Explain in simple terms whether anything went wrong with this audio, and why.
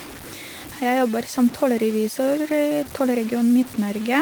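Something did go wrong: the speech has a grainy, gritty edge that runs through the whole clip, from start to finish. The likely cause is low bit depth without dither. The audio seems to have been squeezed into very few levels, roughly five bits' worth, and simply chopped down to a step instead of being smoothed with a bit of added noise. Because that error tracks the speech itself, the roughness shifts as the voice moves, and the quieter parts turn especially crunchy. The voice compression underneath sounds only lightly affected and full-range.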